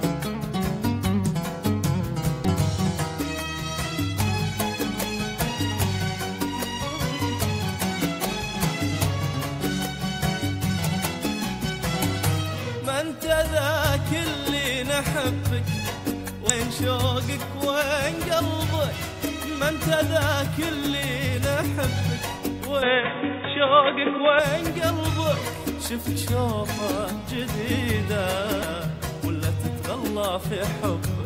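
Brief chirps or blips at 2.45, 16.5, 26.06 and 28.62 s are damaged data in a compressed stream: the decoder misreads corrupted frames, loses sync and searches for the next frame header. Their instant artefacts set them apart from ordinary clicks or dropouts. From 22.82 to 24.39 s the sound turns dull and boxy, with nothing above 3.7 kHz, a level shift of around 5 dB and a new noise floor far below the signal. There's no gap at the change, and that points to a likely input switched to a poorer device rather than a filter or codec change, since the tone, level and noise all shift together.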